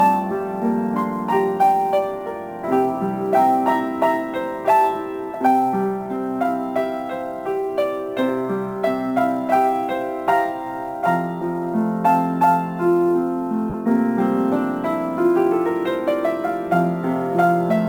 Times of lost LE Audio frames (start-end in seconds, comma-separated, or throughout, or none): 13.70-13.74